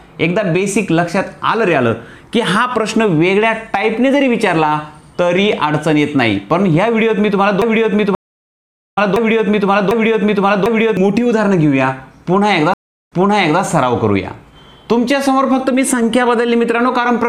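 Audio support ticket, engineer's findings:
Broken-record loop, 7.62 to 10.97 s: a 0.75 s fragment repeats exactly, four times back to back, and the intervening audio is lost. Likely a stalled player buffer re-sending its last fragment. Waveform shows identical repeating blocks; spectrogram shows a tiled pattern.

Stream reconnect, 8.15 to 8.98 s: a dropout of about 0.8 s, then audio resumes roughly 0.7 s further on. Connection dropped and a fresh decoder restarted. Flat-line gap in the waveform; blank band on the spectrogram.

Stream reconnect, 12.74 to 13.61 s: a dropout of about 0.38 s, then audio resumes 0.5 s earlier, so material repeats after the gap. Server resent a burst on reconnect. Short blank band, then duplicated texture.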